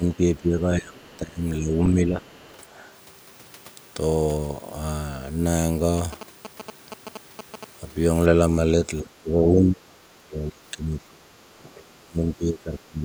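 From 0.0 to 0.05 s, 0.4 to 1.43 s and 1.59 to 2.23 s the speech dips by roughly 10, 20 and 5 dB. This is speech suppressed in double talk, likely an echo canceller turning the near talker down while the far end was also active.

Inside and just after those dips, at 1.13 to 1.17 s, 1.71 to 1.78 s and 2.24 to 2.48 s, faint scraps of another voice appear, around 30 to 35 dB below the speech. This is the other side's voice leaking through, likely loudspeaker echo the canceller left in the microphone signal.

From 5.98 to 7.64 s a galloping pattern of short buzzes sits about 15 dB below the speech, repeating at 217 Hz. These are GSM signalling bursts: a nearby 2G phone exchanging control traffic, with the bursts rectified by the audio circuitry.

From 8.81 to 11.43 s and 11.63 to 13.04 s the speech is again suppressed in double talk, now much harder, with drops of around 30 dB that affect about 2 s and 1.5 s of the talker.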